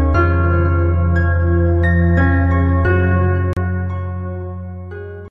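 There's a gap at a join of encoded pieces at 3.53 to 3.57 s: a 35 ms dropout with smeared edges, where untrimmed encoder delay and end padding sit between separately encoded segments.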